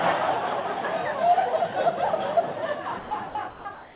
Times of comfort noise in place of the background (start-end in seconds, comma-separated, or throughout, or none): 3.74-3.95